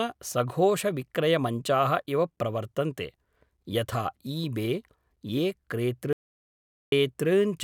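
At 6.13 s the signal feeding the recording was likely interrupted, through a dropped connection or an input briefly muted, while the file kept filling with silence. That is an audio dropout to silence: the speech cuts off mid-flow and the gap is dead, with no room tone or hiss at all, until it resumes at 6.92 s. About 0.79 s of speech is simply missing rather than masked.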